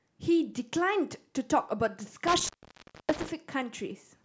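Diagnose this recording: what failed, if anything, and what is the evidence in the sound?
Intermittent contact in the analogue wiring: between 2.27 and 3.29 s the speech drops out for about 0.6 s, crackling at the edges and faint hiss underneath, like a loose plug.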